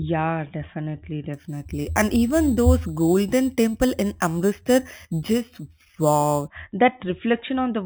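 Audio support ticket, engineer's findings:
Imaging from sample-and-hold upsampling, 1.34–6.48 s: metallic fizz tracking the speech, images about 19 dB down in the 4–8 kHz band, mirrored above 4 kHz. Consistent with 8 kHz material raised to 44.1 kHz by sample repetition without an interpolation filter. Spectrogram shows inverted harmonics above 4 kHz; waveform shows staircase steps.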